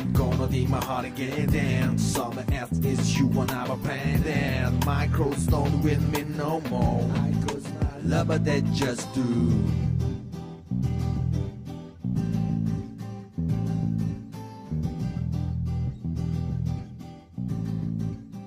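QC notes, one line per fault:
No faults heard anywhere in this clip.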